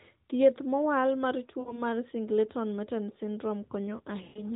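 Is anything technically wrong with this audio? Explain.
Yes. Lost AMR speech frames at 1.60–1.83 s, after "thieth mowal mar", and at 4.24–4.44 s. The decoder stretched the last good frame at fading gain, smearing about 60 ms, then 120 ms, of speech.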